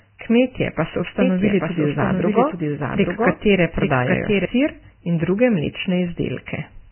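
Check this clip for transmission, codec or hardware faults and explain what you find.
Two faults are audible: heavy low-bitrate coding damage across the whole recording, and a doubled audio track in its middle section.

Vorbis compression, throughout: the speech is likely coded with Vorbis at a very low bitrate, around 10 kbps. Nothing survives above 3.1 kHz, and the remaining treble is so coarsely quantised that detail turns to hiss-like grain, roughening voiced tones and smearing consonant onsets.

Doubled audio track, 1.21 to 4.45 s, starting just after "kmetje pa so": a second copy of the speech, likely from a slower capture path or an out-of-step edit, runs roughly 0.7 s behind the original and about 5 dB quieter. It is full-band with no reverberant tail, and it starts and stops abruptly.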